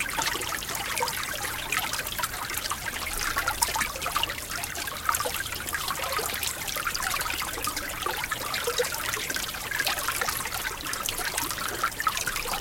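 A recording of everyday sounds carries a resampler restarted on every block throughout: 10 ms blocks each converted separately give a 100 Hz buzz, consistent with 44.1 kHz to 48 kHz conversion, that, unlike mains hum, vanishes during silence.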